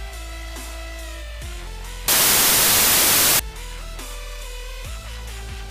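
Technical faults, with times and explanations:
2.08 to 3.39 s, samples built from the wrong bytes. Misassembled bytes turn fast-changing low bits into dominant values. Loud, harsh broadband noise results.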